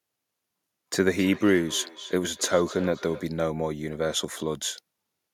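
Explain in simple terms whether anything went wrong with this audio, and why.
Something did go wrong here. From 1.18 to 3.29 s, the speech comes back as a faint repeat, about a third of a second behind. This is feedback echo between two devices. Two devices in the same room are on one call. One plays the other's sound out loud. The other device's microphone hears it and sends it again. Its echo canceller only removes its own playback, so this copy gets through. The repeats stay quiet beneath the speech.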